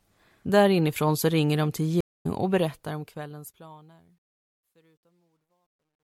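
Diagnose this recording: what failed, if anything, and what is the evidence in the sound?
The speech drops out at 2.01 s. Silence follows for 231 ms, until 2.26 s. When the audio returns, it has jumped ahead by roughly a third of a second. This is a stream reconnect, a failure at the network stage. The connection broke and the player fell silent. It then reconnected and started a fresh decoder mid-stream. The stream kept moving during the gap, so that stretch of speech is lost.

From 2.43 s onward the fade-out carries truncation distortion on a fade. The stage is the gain or sample-format conversion. The problem is that the volume stage keeps only 12 bits and adds no dither. As the level falls toward the smallest step, the waveform collapses into a few square steps. The tail turns gritty. It is worst from 4.16 s to the end.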